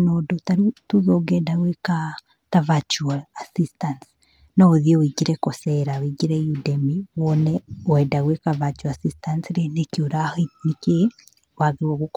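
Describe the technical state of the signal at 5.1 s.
At 5.1 s the speech signal is intact, with no audible technical fault.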